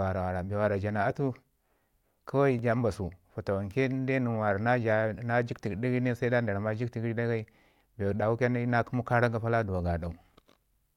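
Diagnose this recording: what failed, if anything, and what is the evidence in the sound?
At 2.59 s the speech jumps, skipping roughly a millisecond or two with no gap of silence. That's likely a dropped buffer (overrun) at the driver or buffer stage: the samples got overwritten before being read, leaving the two sides joined directly.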